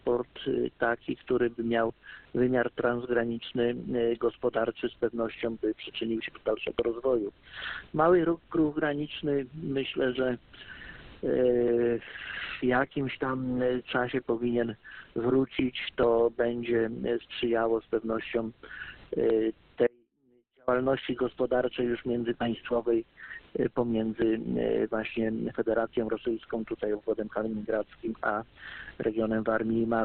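At 19.87 s the sound cuts out abruptly and stays gone until 20.68 s, a gap of about 0.81 s. This is an audio dropout to a faint residue. The wanted signal vanishes mid-flow rather than fading, yet the path stays live. What remains in the gap is a faint leak of the sound itself, roughly 35 dB below its normal level. The likely cause is a brief loss of the main feed while the downstream chain kept passing signal.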